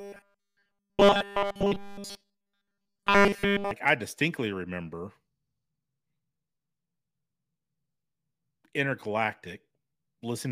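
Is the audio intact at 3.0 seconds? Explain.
No. From 0.01 to 3.71 s, just before "I distinctly remember", the speech has a robotic sound from repeated short buffers, a fixed metallic 200 Hz buzz. That likely comes from a 5 ms chunk looping almost continuously while real audio is skipped, so it hums steadily rather than stuttering or dropping out.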